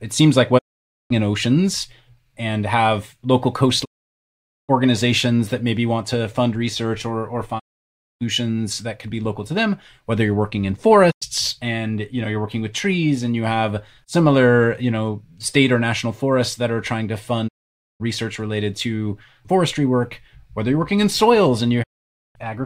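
A digital broadcast dropout recurs through this speech: the receiver repeatedly loses the signal or rejects corrupted frames and mutes, each time with a quick fade of about 20 ms. The holes fall at 0.57–1.12 s (after "it seems like", resuming at "in oceans and have"), 3.84–4.71 s, 7.58–8.23 s (between "fund research or or" and "that could be local"), 11.10–11.24 s, 17.47–18.02 s (before "related to forestry work") and 21.82–22.37 s. They last between about 0.1 and 0.8 s, in steps consistent with 32 ms frames, and the speech sent during each hole is simply gone.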